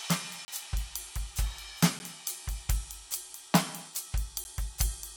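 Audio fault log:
0.45–0.48 s: block of digital silence. The music drops to silence for 30 ms. The sound cuts out and back with no fade, leaving a short hole.
1.99 s and 4.44 s: block of digital silence. Each 10 ms gap cuts out and back without a fade. Each one is heard as a tick or dip rather than as silence.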